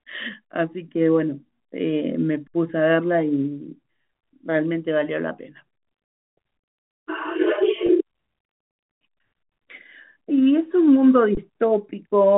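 A speech clip, heard through a telephone-band G.711 channel with nothing above 4 kHz, has three underruns with held sample, at 2.48 to 2.54 s and 9.43 to 9.49 s (64 ms each) and 11.35 to 11.37 s (21 ms, which fits a 1024-sample buffer). Each time the output buffer ran dry, the converter held its last value, so the waveform goes flat, and the spectrogram shows a blank vertical strip. Playback then resumes where it stopped, with only a soft edge. At 7.86 to 7.89 s, a 20 ms packet loss with pitch repetition was bridged by repeating the last pitch period. This gives a brief buzzy, held quality. The waveform shows identical repeated cycles, and the spectrogram shows frozen harmonics.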